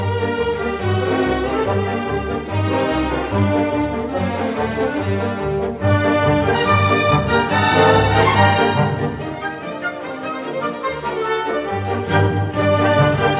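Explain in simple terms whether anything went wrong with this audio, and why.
Nothing went wrong; it sounds like ordinary call audio.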